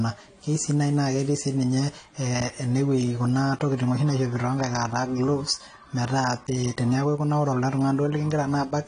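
Speech, and it's dull and smeared all the way through, with a swirly, fizzy edge on sibilants and nothing above 10 kHz. That's likely AAC compression, with a hard cut-off and starved bands that fit a low bitrate around 32 kbps.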